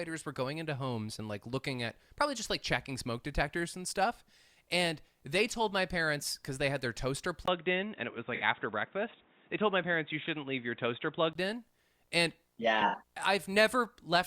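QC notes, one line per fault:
7.46–11.35 s, input switched to a poorer device: after "they had their toaster", a 20 ms gap, then sound dulls with nothing above 3.8 kHz and a faint new noise floor about 35 dB down; likely a microphone change.
8.35–8.42 s and 12.87–12.95 s, AAC frame loss with concealment: each 64 ms dropout, which fits three lost frames, is filled from earlier spectrum, giving a brief smeared, noisy patch.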